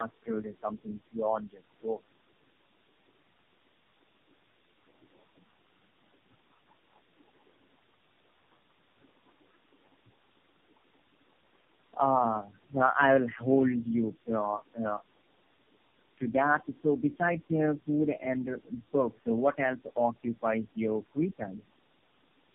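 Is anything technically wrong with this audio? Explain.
Yes. Tandem speech coding runs throughout: the speech passed through three low-rate coders in a row, which fits a G.729A-to-AMR-NB chain. Each re-encodes the previous one's damage, leaving it rough, muffled and warbly. A spectrogram shows nothing above 3.8 kHz and smeared, unstable harmonics.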